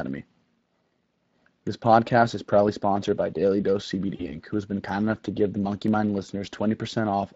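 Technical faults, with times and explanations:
Throughout, Speex codec: the speech has a plainly audible hoarse, noisy graininess from CELP coding with limited excitation bits, which fits a bitrate around 20 kbps.
4.15–4.35 s, VoIP packet loss concealed by the speech codec: about 40 ms of audio went missing. The decoder stretched its last pitch and filter into a fading buzzy tone or coloured noise, and the speech stays weakened for a moment after it returns at "who has been".
4.89 s and 5.88 s, dropped samples: each is a single sharp click, likely from a fraction of a millisecond of missing samples making the waveform jump. The first falls between "who has been" and "enough to give the".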